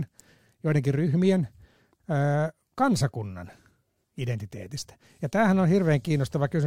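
Listening through this recording of speech, nothing stood out as a technical problem.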